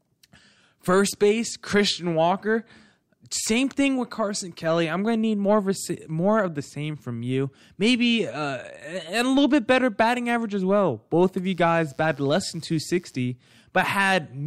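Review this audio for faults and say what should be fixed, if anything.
Mains buzz runs from 11.44 to 13.16 s, a steady, raspy tone sitting roughly 35 dB below the speech. Its 60 Hz base and stack of harmonics up to several kHz tell it apart from a plain hum, which stays smooth and low. The rasp comes from sharp switching spikes, twice per cycle, from a dimmer, rectifier or unshielded run. Keep dimmers and switching supplies off the audio circuit and use shielded, properly grounded cabling.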